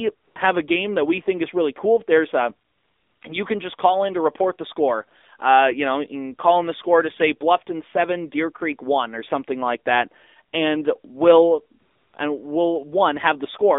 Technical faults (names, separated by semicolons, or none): AMR narrowband mobile codec; AMR comfort noise